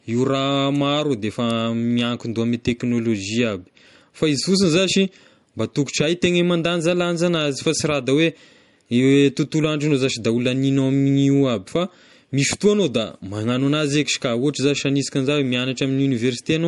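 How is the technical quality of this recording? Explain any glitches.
The recording has one fault running through the whole clip: plainly audible MP3 compression. The speech sounds watery and swirly, the s sounds turn metallic and chirpy, and nothing is heard above 11.1 kHz, so the top end feels dulled. This is likely low-bitrate MP3 encoding, consistent with roughly 48 kbps. Short of bits, the encoder cuts off the treble and drops weak frequency lines, which flicker on and off between frames, and consonant attacks smear.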